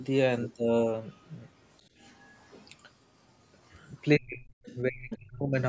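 From 1.11 to 1.34 s, 2.01 to 2.34 s and 3.70 to 3.88 s, a faint second voice sits far below the main speech, likely the other side's voice leaking through from a loudspeaker as echo the canceller left behind. It returns at 4.64 to 4.77 s and 5.11 to 5.18 s, much louder each time. Between 4.18 and 4.49 s, and again from 4.80 to 5.57 s, the main speech sinks deeply while the other side is active. That is likely speech suppressed in double talk: the canceller could not tell the talker from the echo and turned both down.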